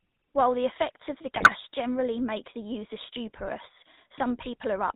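GSM full-rate codec coding runs through the whole speech clip: nothing above 4 kHz survives, and the pulse-driven vocal-tract model leaves a plainly audible buzzy, gravelly roughness. GSM bit errors strike from 1.36 to 1.53 s, where corrupted filter, pitch and gain values bend the spectrum and level frame by frame, producing squawks and gargling.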